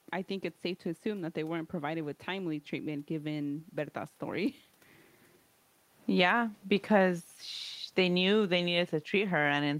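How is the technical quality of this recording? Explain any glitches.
There is one glitch. From about 7.98 s to the end, the automatic gain is falling: after finding the input too loud or its background noise too strong, the gain control steadily turns it down. Both speech and room background sink together, unlike the talker moving at around 4.5 s, where only the voice changed.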